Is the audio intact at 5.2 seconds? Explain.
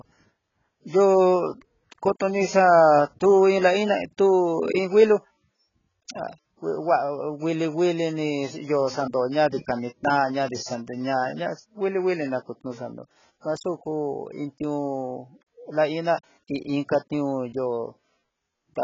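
No, not really. At 5.2 seconds, as across the whole clip, the speech carries heavy damage that sounds like AAC compression, likely AAC-LC at a very low bitrate, around 12 kbps. Nothing reaches above 7.5 kHz, so the top end is cut off and the sound comes across dull. The codec is throwing away most of the spectral detail to fit that budget, leaving gaps and smearing, so sibilants and held sounds get a fizzy, warbly texture.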